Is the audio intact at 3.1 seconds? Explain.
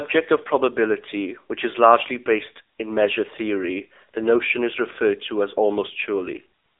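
No, the AMR narrowband mobile codec runs through the whole clip, including 3.1 seconds. Speech is confined to a telephone band of about 300 Hz to 3.7 kHz, with nothing above 3.8 kHz. The codec rebuilds the voice from a sparse pulse-driven vocal-tract model, and the plainly audible buzzy, synthetic quality fits a low bitrate near 7.95 kbps.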